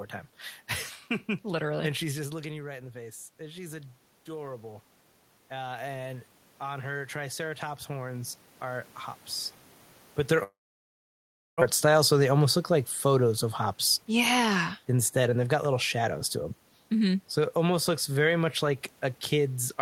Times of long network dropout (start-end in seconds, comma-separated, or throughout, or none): 10.43-11.64